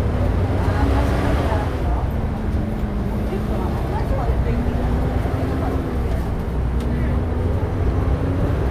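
Nothing stood out on listening to this everyday sound recording.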